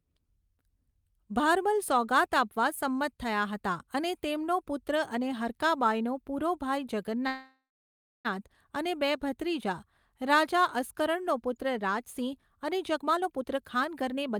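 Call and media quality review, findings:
Call audio freeze, 7.27–8.27 s, after "હરકા બાઇનો પૂરો ભાઈ". Last sound stretched into a fading buzz or hiss, then about 0.62 s of silence. Likely cause: jitter buffer underrun from held-up packets. Resumes at "અને બે ભત્રીજા રાજા" with nothing lost; delay up 0.97 s.

Jitter buffer speed-up, 12.93 s to end of clip. Speech runs at 127% speed with pitch unchanged and sounds hurried. Buffer overfilled, so the receiver trimmed pitch-period-sized pieces repeatedly, removing around 0.4 s to pull latency back down.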